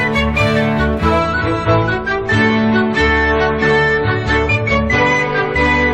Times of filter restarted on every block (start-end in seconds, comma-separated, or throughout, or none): none